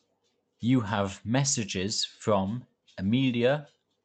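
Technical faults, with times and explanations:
Nothing goes wrong here, just speech coming over an Opus call link at 48 kbps, with the top end stopping at around 8 kHz, which is what that codec setting does.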